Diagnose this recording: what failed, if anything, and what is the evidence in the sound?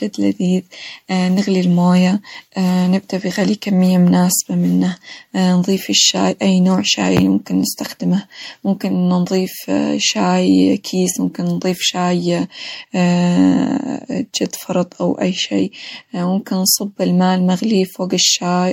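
The damage sits at the codec stage and runs through the whole speech recording. The audio swirls and sounds hollow and smeared, consonant attacks are blurred, and nothing reaches above 16.6 kHz. The likely cause is generation loss from around five rounds of MP3 encoding at 64 kbit/s. Each decode and re-encode quantised on a shifted frame grid, so noise and spectral holes piled up. A single 64 kbit/s encode would not sound this washed-out.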